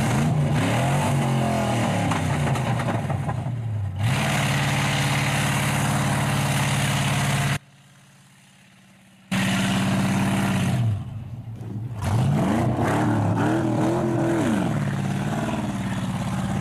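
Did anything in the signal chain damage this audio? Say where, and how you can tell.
Yes: an audio dropout to a faint residue, 7.57–9.31 s, likely a loose analogue connection. The waveform abruptly shrinks to a trace about 30 dB down, and the spectrogram goes nearly blank.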